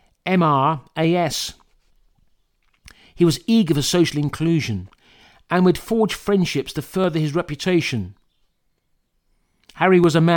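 Clock drift buffer slips run through this speech clip from 0.44 to 10.04 s, with a click every 0.6 s, around fifteen in all. The likely cause is two devices on independent clocks about 500 ppm apart, forcing the buffer to drop or repeat about 15 samples each time.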